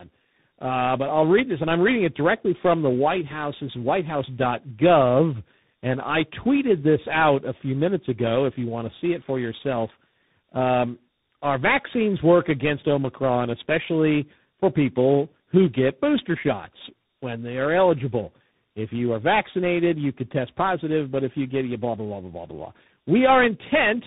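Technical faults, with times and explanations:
Throughout, tandem speech coding: the speech sounds rough, muffled and warbly, which points to three speech coders in a row, likely a G.729A-style coder, then ADPCM such as G.726, then CVSD, with plain telephone PCM links between them. Each stage decodes and re-encodes the previous stage's errors, so the damage compounds. Nothing remains above 3.8 kHz.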